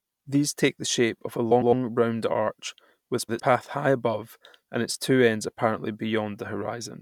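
Speech, with frames out of order at 1.51–1.73 s after "the shape of a" and at 3.18–3.40 s after "round arch with". Two adjacent blocks of about 105 ms swap places. Each stretch flutters.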